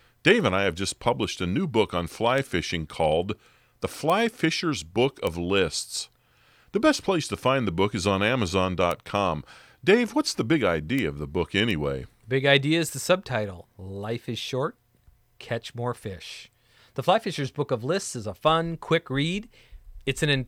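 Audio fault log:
2.38, 4.10, 5.27, 8.91, 10.99, 11.71 s: bit error spike. A flipped bit makes one to three samples jump to about -10 or -16 dBFS and return, heard as isolated broadband ticks in the speech.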